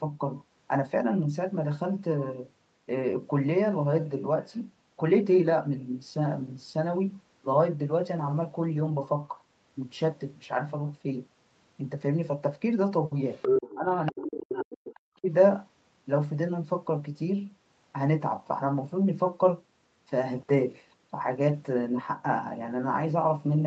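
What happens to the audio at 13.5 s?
Other side's voice leaking through, from 13.33 to 13.76 s: a second voice comes up alongside the talker for a bit under half a second, roughly 5 dB louder than the talker's own speech. The likely cause is the far end's audio playing from the device's loudspeaker and reaching the microphone, with the echo canceller failing to strip it out before it went into the call, where it is band-limited to 8 kHz like everything else.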